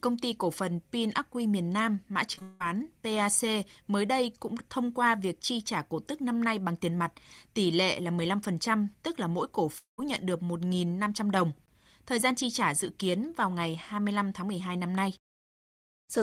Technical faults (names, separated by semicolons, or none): short concealed packet loss; long network dropout